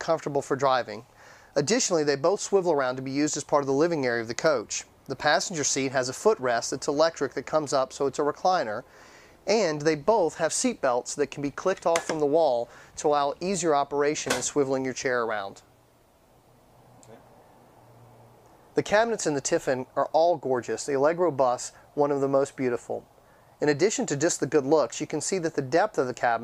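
No technical faults are audible in this audio.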